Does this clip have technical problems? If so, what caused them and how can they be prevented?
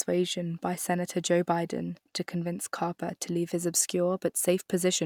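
No, there are no technical problems to prevent here.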